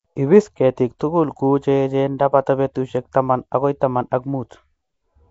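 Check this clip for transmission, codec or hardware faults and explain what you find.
One codec fault runs through the whole recording. Throughout the speech there is a rough, hissy halo and a smeared, underwater quality, with nothing above 7.7 kHz. This is likely Nellymoser compression at a rate that fits about 32 kbps. The codec spends a fixed, small bit budget on each short block, leaves weak bands empty, and fills those bands with noise.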